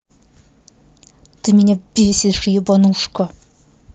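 No faults to report in this speech; it comes over a WebRTC call path whose Opus coding rolls off the top end at around 8 kHz.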